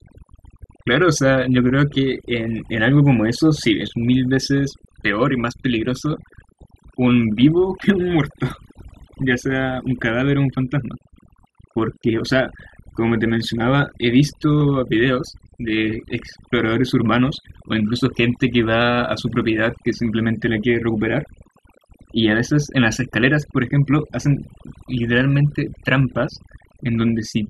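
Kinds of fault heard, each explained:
Overdone noise removal: Noise reduction set too aggressively across the whole clip. Frequency bands close to the estimated noise floor are gated down, taking low-level speech detail with them, so the background in pauses drops and breaks up into sparkling residue.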